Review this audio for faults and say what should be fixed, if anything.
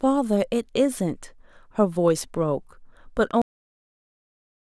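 The final stretch of audio buffers was never written out or played back, leaving a cut-off end. At 3.42 s the speech stops abruptly in the middle of a sound and drops straight to digital silence, with no natural decay or room tail, and that silence runs through to the end of the clip, about 1.3 s of missing material. To prevent it, make sure the recorder or encoder flushes and finalises all pending buffers before the stream or file is closed.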